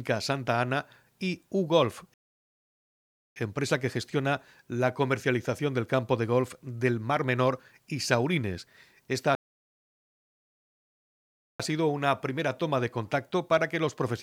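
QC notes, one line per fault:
2.14–3.36 s and 9.35–11.60 s, rebuffering stall: the speech halts mid-stream and drops to silence twice, for about 1.2 s and then about 2.2 s. Each time it picks up at exactly the point where it stopped, with nothing skipped or repeated. The playback buffer ran dry, so the player waited for more data to arrive before continuing. No audio is lost, but the two gaps add roughly 3.5 s of dead air.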